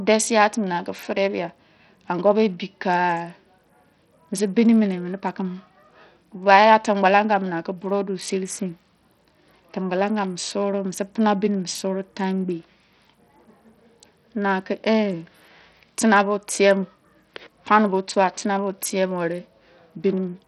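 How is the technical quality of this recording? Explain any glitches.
The technical quality is poor, with one fault heard throughout the speech.

Bluetooth SBC compression: from start to finish the treble flickers and thins, with a gritty grain and aliasing riding on the sound. The likely cause is a Bluetooth link using SBC at a small bit pool, which fits a bitrate near 64 kbps: the weak upper sub-bands get few bits or none, and the rest are coarsely quantised. A spectrogram would show nothing above 16.5 kHz and patchy, blocky energy in the upper bands.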